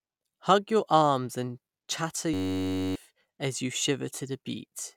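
Speech. A system hang loop runs from 2.34 to 2.96 s, after "your arms and chatter". One 10.67 ms slice repeats as a steady 93.8 Hz buzz, which fits a 512-sample buffer.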